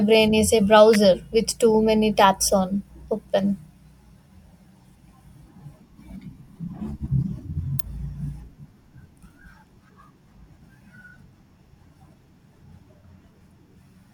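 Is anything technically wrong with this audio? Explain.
Yes. An electrical switching spike occurs at 0.94 s and again at 7.79 s. Each is a sharp, very brief snap laid over the speech, most likely a nearby switch, motor or static discharge arcing and inducing a burst into the audio line.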